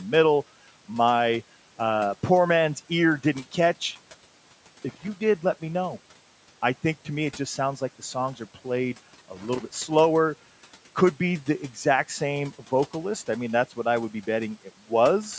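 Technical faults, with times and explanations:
4.89–5.08 s and 9.36–9.76 s, loose connector crackle: a worn contact kept making and breaking, chopping the signal into irregular scratchy bursts, the first ending just before "did let me know".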